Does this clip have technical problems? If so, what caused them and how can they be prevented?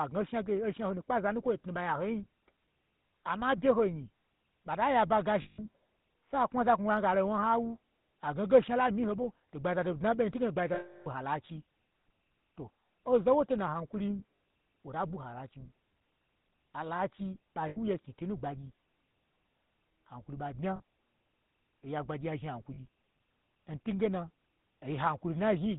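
Yes. The whole clip carries the GSM full-rate codec sound: nothing above 4 kHz and a buzzy, gravelly roughness on the speech, which fits the old 13 kbps mobile codec rebuilding the voice from a vocal-tract model driven by sparse, regular pulses. Carrying the call over a wideband codec such as AMR-WB or Opus end to end would avoid it.

There are also lost GSM frames at 5.42–5.68, 9.22–9.25, 10.74–11.07, 14.36–14.40, 17.68–17.78, 20.76–20.80 and 22.74–22.80 s. The decoder repeats the last good frame, so each gap rings roughly and metallically, and the longest, at 10.74 s, lasts 0.32 s. Better radio coverage and stronger error protection on the link would keep those frames from dropping.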